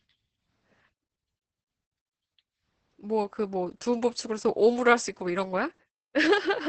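Right from the start the speech carries heavy Opus voice compression. The linear-prediction coder is squeezing the excitation hard, which sounds like roughly 10 kbps. Nothing survives above 8.5 kHz, so voices come out muffled, hoarse and faintly robotic.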